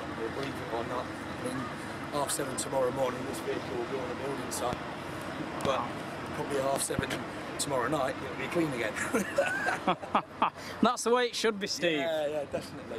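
Loud pops at 4.73–4.75 s, 5.65–5.68 s and 6.76–7.01 s, the last a double pop, stand some 15 to 20 dB above the audio, which continues beneath them. They sound like sharp thumps, likely from a plug, switch or static discharge adding a sudden voltage pulse.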